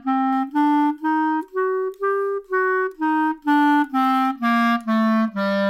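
From 0.33 s to the end, the sound has pre-emphasis left on. It follows the FM 50 µs curve, so the matching de-emphasis cut was never applied on playback. The treble rises at a steady first-order slope from around 3.2 kHz, reaching about 11 dB above the 1 kHz level at 10 kHz. The result is thin, glassy and hissy. A treble shelf would level off, but this boost keeps climbing with frequency.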